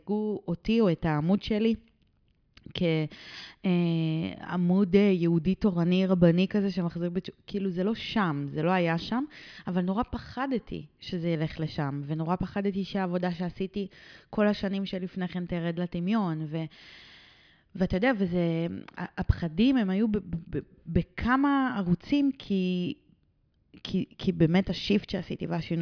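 No technical faults occur at any point in this speech recording, so there are none to describe in time order.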